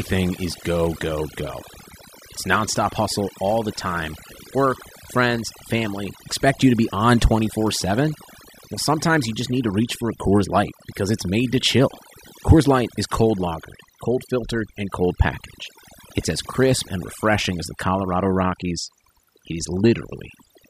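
Speech throughout the clip suffers from overdone noise removal: over-aggressive spectral suppression gates out bands near the noise floor, leaving twinkling artefacts in the silences and stripping quiet parts of the voice along with the noise.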